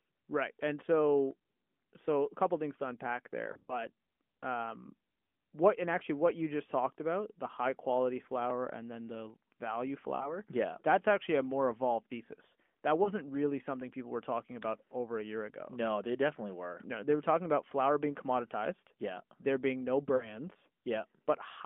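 Lost AMR speech frames cause brief warbly dips at 3.52–3.86 s, 10.16–10.37 s after "and then the value", 13.04–13.12 s after "more evolved thesis that", and 20.16–20.38 s after "being no". Each time, the decoder stretches the last good frame and fades its gain.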